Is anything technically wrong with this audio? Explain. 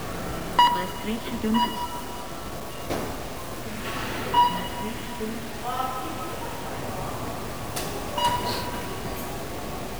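Yes. Throughout, the audio was likely truncated to a very low bit depth without dither, consistent with about 6 bits, leaving grainy distortion only around 15 dB below the signal that tracks it.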